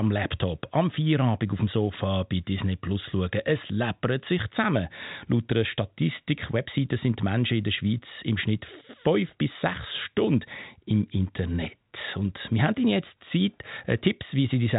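No faults found in the speech; the G.711 telephone coding band-limits it as expected, with nothing above 3.8 kHz.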